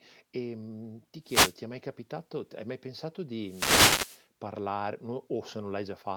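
A short swish of static washes over the speech from 1.22 to 1.60 s, and a longer burst runs from 3.41 to 4.26 s. These are wireless microphone noise hits: the FM radio link faded as reflections cancelled, letting receiver noise break through.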